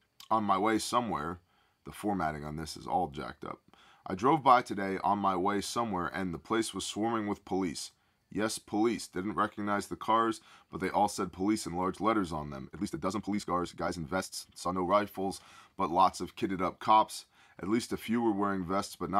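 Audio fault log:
12.63–14.91 s, time-stretched section: just after "in large letters on", the speech suddenly runs about 1.48 times faster while its pitch stays put, sounding rushed. This is likely software squeezing the passage to fit a length by dropping short pieces.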